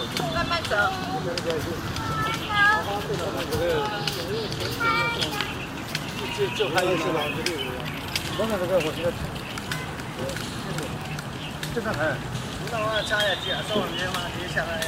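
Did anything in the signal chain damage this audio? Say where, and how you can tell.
No, nothing in the signal chain has damaged this recording of sounds. No stage from capture to playback leaves any trace that can be heard.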